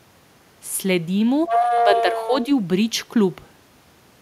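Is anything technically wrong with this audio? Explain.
Yes, there are two faults around the middle of this speech clip.

Other side's voice leaking through, 1.47 to 2.45 s: a second voice comes up underneath the talker, roughly as loud as the talker. This is likely echo from the far end of the call: the talker's loudspeaker plays that other voice, the microphone picks it up again, and the echo canceller fails to strip it out before sending.

Speech suppressed in double talk, 1.79 to 2.33 s: while the leaked voice is present, the talker's own voice sinks by around 5 dB in patches adding up to about half a second. The likely cause is that both sides spoke at once, and the echo canceller, unable to tell the talker from the returning echo, pulled the whole signal down together.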